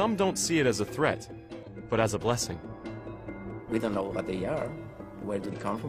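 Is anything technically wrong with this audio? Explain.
Yes. There are two bursts of damaged data in a compressed stream, at 1.63–1.69 s and 5.48–5.54 s. In each burst, corrupted bytes make the decoder misread those frames and lose sync until it finds the next valid frame header. Each one sounds like a brief chirp or blip of about 60 ms that interrupts the sound.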